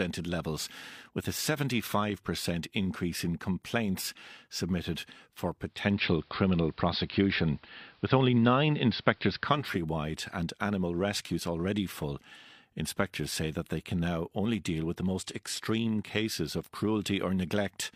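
Digital radio blending to analogue runs from 5.59 to 9.85 s, after "in complaints submitted for" and until "and animal rescues already". The receiver lost digital and cross-faded over 430 ms to the AM broadcast, so hiss rises and the level shifts by about 4 dB.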